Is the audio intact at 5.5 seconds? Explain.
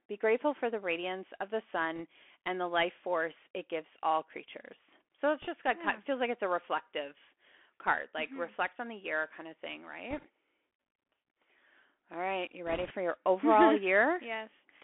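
No, not quite. Right before 5.5 s, from about 5.42 to 5.47 s, just ahead of "just got of feels", there's a burst of bit errors on a Bluetooth voice link. With each CVSD bit carrying only a small step, the flipped bits (somewhere around a percent or two) come out as a brief rushing crackle rather than a sharp click.

Under all of that, the whole clip carries the Bluetooth CVSD headset codec, which fits a 64 kbps link. The sound is squeezed into roughly 300 Hz to 3.4 kHz, with a grainy hiss, scratchy s sounds and plainly audible distortion on louder high-frequency bits.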